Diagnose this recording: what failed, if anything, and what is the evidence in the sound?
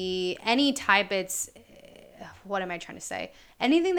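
Nothing failed; no faults are audible anywhere.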